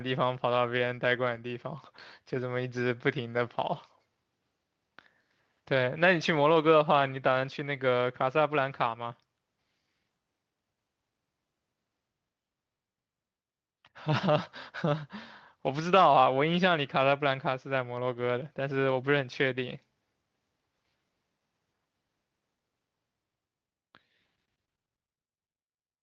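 Speech that's come through an Opus call, with a lost packet rebuilt from error correction at 3.33 to 3.39 s and again at 16.13 s. There's no gap either time, just a brief rougher, noisier patch where the decoder played the low-bitrate backup copy carried in the following packet. The first sounds like two packets' worth, the second like one. The call path's usual coding noise and the top end stopping around 8 kHz are audible throughout.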